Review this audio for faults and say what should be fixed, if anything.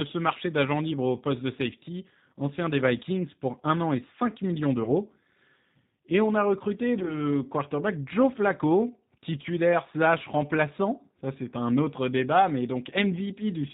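The speech is band-limited and rough, with a plainly audible synthetic edge, because the G.729 codec, here the G.729A variant at 8 kbit/s, rebuilds the speech from a vocal tract filter, a pitch predictor and sparse pulses, passing nothing above 4 kHz. Preventing this means carrying the call on a wideband or higher-rate codec such as G.722 or Opus.

Two dropouts are patched over with stretched, fading sound rather than silence, at 4.83 to 4.92 s and, just after "on a recruté", at 6.99 to 7.17 s. This is VoIP packet loss concealed by the speech codec: the decoder extrapolated its last pitch and filter while lowering the gain. The gaps fit about 30 ms and 20 ms of missing frames. Because each frame builds on the last, the second disturbance lasts well beyond the loss itself. Preventing this means a jitter buffer, forward error correction or packet redundancy on the network path.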